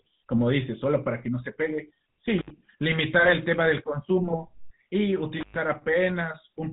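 From start to finish the speech carries the buzzy, gravelly roughness of the GSM full-rate codec: a vocal-tract model driven by spaced pulses, with nothing above 4 kHz. Unlike a plain low-pass, the grit rides on the voice itself and is plainly audible, consistent with 13 kbps full-rate coding.

At 2.38 to 2.51 s an intermittent contact opens: the sound drops out for about 67 ms, with crackle at both edges and faint hiss in the gap, as a loose plug or cable breaks the line for an instant.

From 4.28 to 4.49 s GSM bit errors corrupt a few decoder frames. Wrong decoder values turn the voice into a squawking, gargling burst. Unlike a contact dropout, the sound distorts instead of falling silent.

At 5.40 to 5.54 s the intermittent contact recurs, this time open for about 114 ms, again a gap framed by crackle rather than garbled speech.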